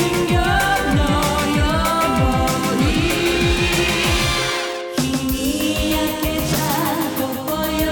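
A doubled audio track runs through the whole clip: a second full-band copy of the sound trails the original by roughly 150 ms, only slightly quieter at about 5 dB down, with no decay or room colour. This most likely comes from a second, slower capture path.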